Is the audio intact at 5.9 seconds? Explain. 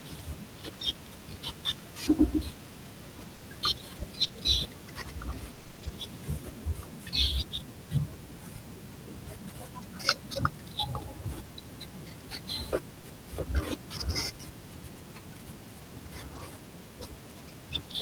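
No. The speech turns choppy from 5.55 to 5.89 s, so 5.9 s falls at the very end of a damaged stretch. This is repeated packet loss: seven gaps, none longer than 20 ms, together about 140 ms, roughly 41% of that span. Each hole was patched by extending the preceding sound, around 40 ms of it rebuilt, which produces the choppy sound with pieces missing. The room noise, about 23 dB below the speech, is part of the recording.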